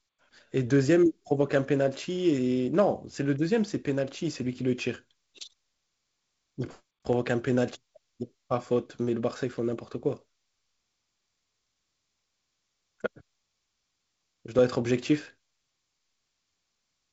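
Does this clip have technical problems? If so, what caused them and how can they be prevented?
No, there are no technical problems in this speech clip. It carries the sound of G.722 wideband telephone coding, with nothing above about 7.7 kHz and a light coding grain that fits the 48 kbit/s mode.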